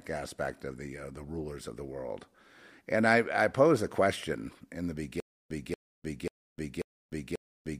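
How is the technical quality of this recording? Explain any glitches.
The recording has one glitch. From 5.20 s, after "a question in the", a stutter with silent gaps runs to the end. A 235 ms burst repeats five times, with 303 ms of silence between. A stalled player likely kept replaying its last fragment, so the remaining speech is lost.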